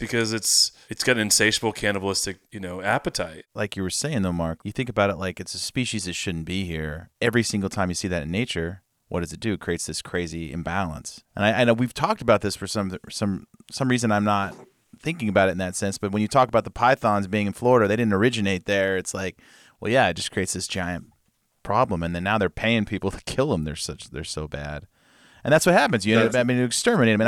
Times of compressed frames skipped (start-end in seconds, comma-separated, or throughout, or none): none